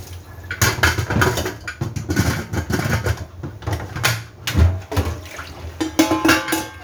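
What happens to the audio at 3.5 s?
Nothing goes wrong at 3.5 s; the audio runs through that moment intact, with no dropout, click or other fault.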